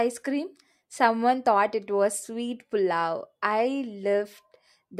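Nothing in the speech stands out as a technical fault, so there's nothing here to flag.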